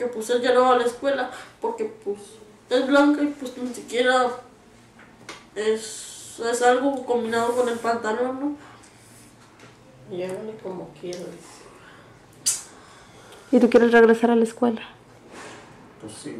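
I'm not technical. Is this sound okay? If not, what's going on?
No. Hard clipping occurs at 2.96 to 3.00 s and 13.56 to 14.25 s: peaks exceed the system's limit and are cut flat, adding harsh crackle.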